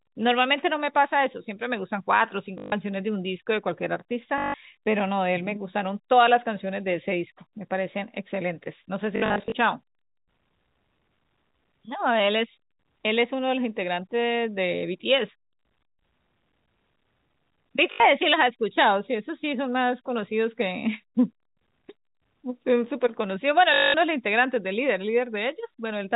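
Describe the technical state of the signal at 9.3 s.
Packet loss with last packet repeated, 9.16 to 9.52 s: lost packets were replaced by replays, so runs buzz at 50 Hz, fitting 20 ms packets.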